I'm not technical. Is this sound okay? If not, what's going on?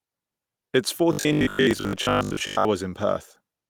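No. There is robotic sound from repeated short buffers between 1.13 and 2.71 seconds. In that stretch the speech turns into a stiff, metallic buzz at about 50 Hz that still loosely follows the talking. The likely cause is new audio arriving too slowly, so the playback keeps repeating its last tiny slice, around 20 ms, instead of playing fresh sound. Most of that stretch is repeats rather than real audio.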